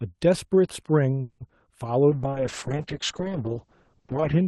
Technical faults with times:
1.21-1.42 call audio freeze
1.48-1.62 short concealed packet loss
2.11-4.47 call bitrate drop

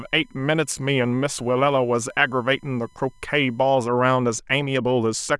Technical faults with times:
0.00-3.71 USB whine

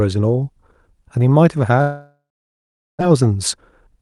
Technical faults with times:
1.81-3.03 long network dropout
3.11-3.97 jitter buffer speed-up

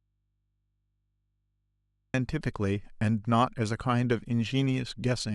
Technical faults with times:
0.00-2.14 audio dropout to a faint residue

